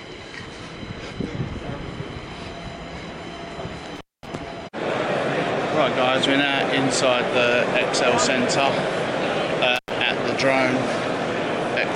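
The sound drops out twice, at 3.96 to 4.27 s and again at 9.76 to 9.91 s, each gap framed by crackle as it opens and closes, with faint hiss in between. The first break lasts about 224 ms and the second about 91 ms. This is an intermittent contact: a loose plug or cable briefly loses its connection, so the signal vanishes and the scraping contact crackles at each edge.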